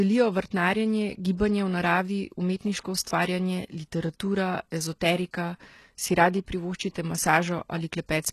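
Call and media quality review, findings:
Whole clip, 0 to 8 s: likely HE-AAC compression at a very low rate, consistent with a 16 kbps stream. Core codes only lower spectrum; treble rebuilt by spectral band replication from copied lower bands under a coarse envelope. Result: plainly audible codec damage, nothing above 12.3 kHz, treble not original, s sounds in the speech gritty, metallic or lispy, harmonics misaligned across the crossover.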